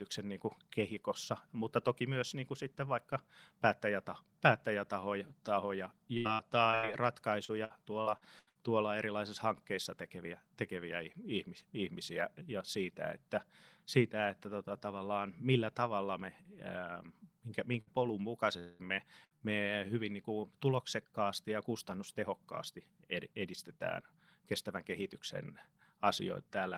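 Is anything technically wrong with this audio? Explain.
Yes. This speech clip has several network packet-loss faults, clustered in two areas.

Repeated packet loss (robotic sound) occurs from 6.17 to 6.85 s, right after "vaikka päättäjäta päättäjätahoja tahoja", and again from 7.45 to 8.57 s, just before "tuolla erilaisissa hankkeissa tekeviä". The first stretch has four gaps, about 240 ms lost in total, and the longest gap is 80 ms. About a third of that span is filled in. The second has six gaps and 320 ms lost, with the longest at 78 ms. Each hole is patched by extending the last sound. The patches come close together, so the speech turns choppy, with pieces missing.

A burst of packet loss hits at 17.81 to 17.89 s and again at 19.25 to 19.33 s. Each removes about 60 ms of audio in one run. The receiver carries the last sound forward and fades it down across the gap. A voiced sound becomes a brief held buzz, and other sounds become a fading hiss. 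Then the speech jumps ahead, and that slice is gone.

From 18.59 to 18.81 s, just before "me me hyvin niin", about 200 ms of speech is replaced by an extended, fading continuation of the preceding sound. It never drops to silence. The likely cause is a long network dropout. Nothing arrived for that stretch, so the receiver kept stretching the last audio it had. When the stream returns, the missing part is simply skipped.

Short concealed packet loss follows at 19.37 to 19.43 s, right after the second burst. Only about 40 ms failed to reach the decoder in time. The gap is filled from the sound just before it, using its pitch if voiced or shaped noise if not, and then blended back into the real signal. It comes across as a quick smear or wobble, and a brief consonant can drop out.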